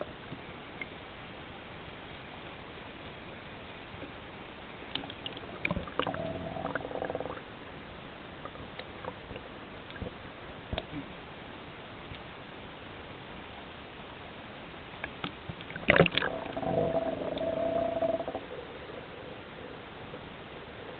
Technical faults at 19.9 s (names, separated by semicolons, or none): none